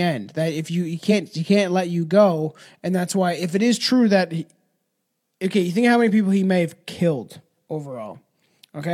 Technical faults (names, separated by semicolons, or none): damaged data in a compressed stream